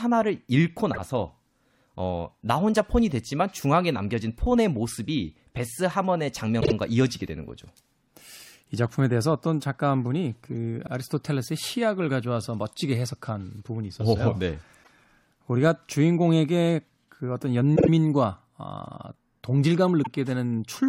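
Repeated frames stutter through this speech clip at 0.93, 6.60, 10.86, 14.83, 17.75 and 20.02 s. Each time, a short block of compressed audio plays again: 26.1 ms at 0.93, 14.83 and 20.02 s, and 52.2 ms at the others, repeated twice in a row at 6.60 and 17.75 s. The 26.1 ms unit is the length of one frame, so duplicated frames in the stream are the cause, adding about a third of a second overall.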